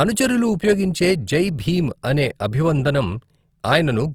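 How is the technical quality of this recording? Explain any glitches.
The recording has one clear flaw: audible codec damage across the whole speech clip, most likely from Opus compression. From start to finish the speech sounds grainy and rough, with a noisy texture. That points to Opus in its CELT (music) mode at a low bitrate, around 24 kbps. The encoder preserves each band's energy but fills starved bands with folded or noise-like content. Bandwidth stays full, with nothing above 20.2 kHz. On a spectrogram, upper bands look mottled and smeared rather than holed, while the waveform looks normal.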